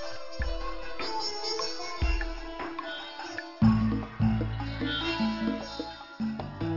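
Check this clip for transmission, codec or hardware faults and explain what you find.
One fault runs through the whole clip: aliasing. The audio was downsampled without a proper anti-alias filter. The sound points to a drop from 48 kHz to 12 kHz. Content above the 6 kHz fold point mirrors back down as false, unrelated tones, only about 10 dB below the real sound. High frequencies turn gritty and metallic, and energy crowds right up to the band edge.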